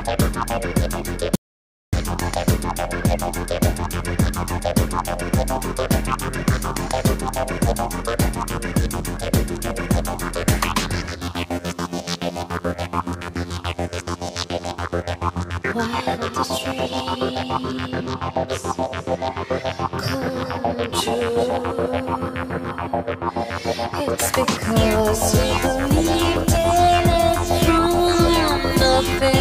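At 1.36 s the audio cuts out abruptly to silence, with no room tone, and resumes mid-flow at 1.93 s. This audio dropout to silence removes about 0.57 s of material, likely from the input signal being lost while the recorder kept writing silence.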